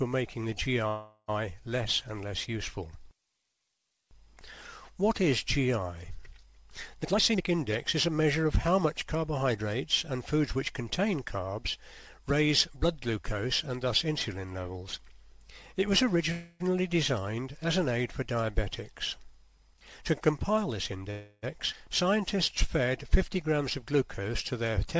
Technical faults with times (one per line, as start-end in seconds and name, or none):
0.88-1.30 call audio freeze
7.03-9.67 jitter buffer speed-up
16.32-16.62 call audio freeze
19.71-21.02 jitter buffer speed-up
21.11-21.45 call audio freeze
21.73-21.75 skip ahead